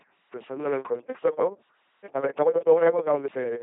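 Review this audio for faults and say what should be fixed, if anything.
The whole clip has gone through an LPC-10 vocoder, and it's heavy damage. The speech comes out as a buzzy, mechanical robot voice, and there's nothing above 3.7 kHz. Each moment gets either a pulse buzz or noise hiss driving a crude vocal tract filter, which fits the 2.4 kbit/s LPC-10 codec. The fix is to send it over a wideband codec at a decent bitrate instead of LPC-10.

From 1.06 s to 3.62 s the pace suddenly jumps to about 1.65 times faster while the pitch holds steady, and it sounds rushed. That's likely a time-stretched section, where software squeezed the audio to fit a length by dropping short pieces. Don't force the audio to a fixed duration. Trim or pad it instead of stretching it.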